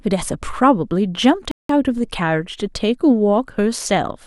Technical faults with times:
1.51-1.69 rebuffering stall
1.98-3.60 DC step

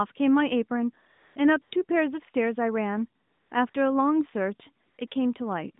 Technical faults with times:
1.12-1.36 AMR comfort noise
1.62-1.72 AMR comfort noise
3.22-3.74 AMR comfort noise
4.86-5.12 AMR comfort noise

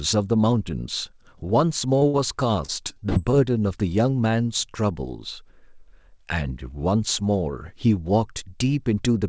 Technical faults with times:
2.00-2.03 short concealed packet loss
2.07-2.16 burst of packet loss
2.66-3.34 repeated packet loss (robotic sound)

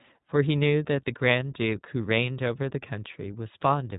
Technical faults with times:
0.00-3.98 iLBC codec

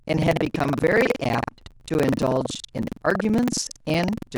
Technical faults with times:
0.00-4.38 buffer tearing

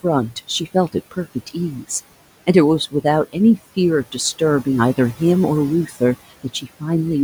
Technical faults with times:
0.00-7.24 noise suppressor artifacts
5.87-6.01 speech cut by the noise suppressor
6.30-6.83 speech cut by the noise suppressor

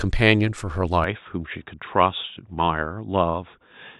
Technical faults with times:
1.04-3.99 input switched to a poorer device

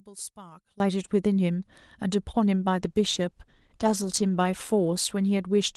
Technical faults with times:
0.00-0.80 one channel inverted
2.70-5.77 call bitrate drop

